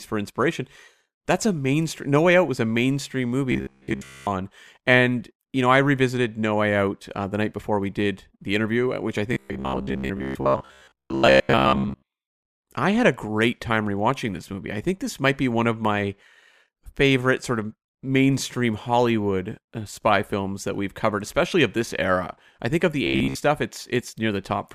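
At 3.52 to 4.27 s, again from 9.33 to 12.07 s, and briefly at 23.07 to 23.37 s, the speech turns into a rigid metallic buzz at about 66.8 Hz, the robotic sound from repeated short buffers. It's likely that audio arrived too slowly and a chunk of roughly 15 ms got looped to fill the gaps, so most of the real signal was skipped and the loop rate imposed that flat pitch while the speech still loosely comes through.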